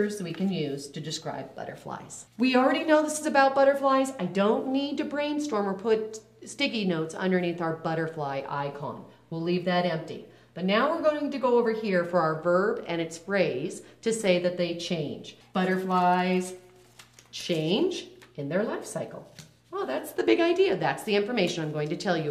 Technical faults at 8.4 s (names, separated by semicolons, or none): none